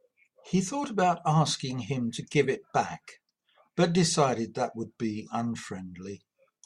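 Nothing in this recording stands out as a technical fault; I can't point to any moment where something went wrong.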